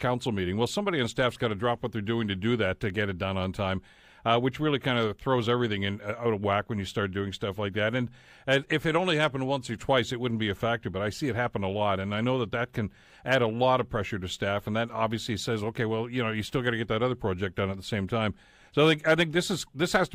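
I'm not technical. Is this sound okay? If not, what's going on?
Yes, no technical faults are audible anywhere in this speech recording.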